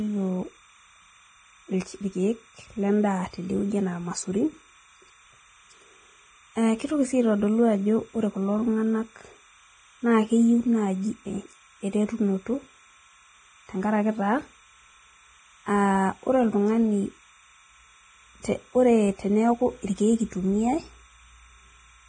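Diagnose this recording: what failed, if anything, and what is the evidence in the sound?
Timecode bleed in the analogue wiring: throughout, a faint chirping warble sits well below the speech, flipping between about 1 kHz and 2 kHz in a 30 frames-per-second pattern, unlike steady hum.

Throughout, the speech sounds grainy and hissy, with smeared consonant attacks and nothing above 9.7 kHz. The likely cause is heavy Vorbis compression at the codec stage, which fits a bitrate near 22 kbps. Unlike broadband noise, the grain follows the speech.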